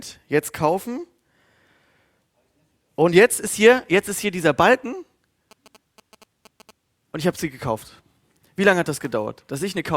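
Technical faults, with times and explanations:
5.51–6.71 s, GSM signalling bursts: a galloping dit-dit-dit of short buzzes breaks into the speech for just over a second, sitting well below the voice at roughly a twentieth of its level. A nearby 2G phone is exchanging brief signalling with its network, and the audio circuitry rectifies those radio bursts into sound. Their repetition rate of about 217 Hz gives each buzz its coarse, rasping pitch.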